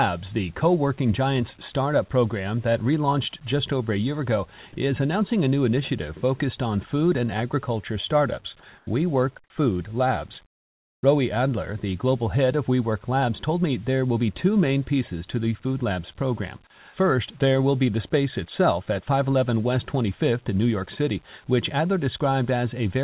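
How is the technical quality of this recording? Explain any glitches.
The recording is narrowband, with nothing above 4 kHz, which fits a G.711 A-law call at 64 kbps, and the background drops out twice. At 8.78 to 8.87 s, just after "food and agriculture startups", and again at 10.46 to 11.03 s, the room tone turns flat and featureless. It is about 3 dB quieter in the first gap and about 19 dB quieter in the second. This is likely comfort noise in place of the background: the sender paused transmission during silence, and the receiver filled the gap with synthetic noise.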